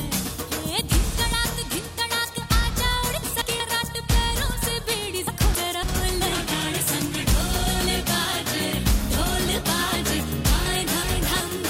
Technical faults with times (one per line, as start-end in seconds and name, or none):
3.23-3.60 frames out of order
5.27-5.83 frames out of order
10.66-11.40 frames out of order